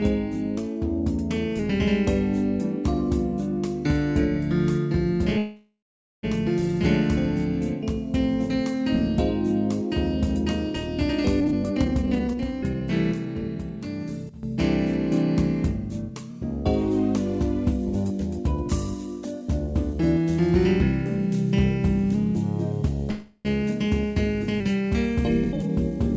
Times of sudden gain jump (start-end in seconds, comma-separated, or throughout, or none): 14.29-14.43